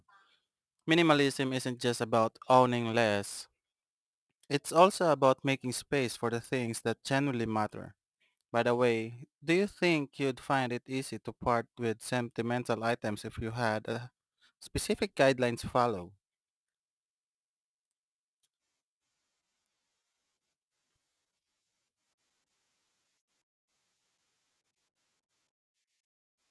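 Aliasing runs through the whole clip: the audio was resampled to a lower rate without an anti-aliasing filter first, which fits a drop from 48 kHz to 22 kHz. Energy above 11 kHz folds back down as false tones, roughly 25 dB below the speech, making sibilants gritty and metallic.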